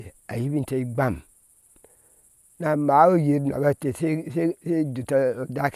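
Speech recording with no technical faults to report.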